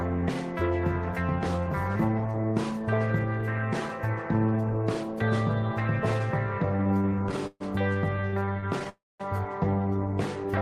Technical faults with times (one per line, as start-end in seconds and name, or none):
6.77-7.62 repeated stalls (stutter)
8.16-8.87 repeated stalls (stutter)
8.89-9.21 call audio freeze